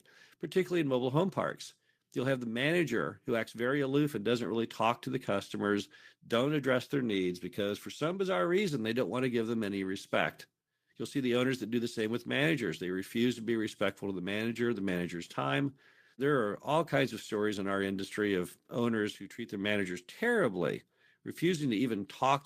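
No technical faults can be heard anywhere in the speech. There is no point in the recording that needs a timestamp or a closer listen.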